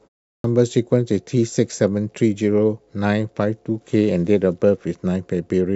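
A speech clip with a clipped start after a pause. After 0.4 s of silence, the sound resumes abruptly at 0.40 to 0.44 s. About 42 ms of its onset is missing while the output device wakes again.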